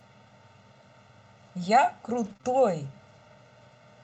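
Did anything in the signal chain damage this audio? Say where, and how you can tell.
Yes. Throughout, the two channels are out of step by about 1.5 ms before being summed to mono, a channel delay producing comb filtering at the wiring or channel-mixing stage. The speech sounds hollow, and a spectrogram shows fixed dark notches from around 300 Hz upward, evenly spaced across the whole clip.

At the network and codec stage, 2.25 to 2.31 s is a lost packet rebuilt from error correction. About 40 ms, which fits two lost packets, plays from the low-bitrate copy carried in the following packet, so there is no gap. It sounds coarser and grainier, with a noisier, less defined patch on the spectrogram.

Immediately after, short concealed packet loss follows in three back-to-back holes of about 20 ms each, at 2.33 to 2.37 s, 2.37 to 2.41 s and 2.41 to 2.45 s. The decoder extended the last sound and blended back, so the speech smears and wobbles.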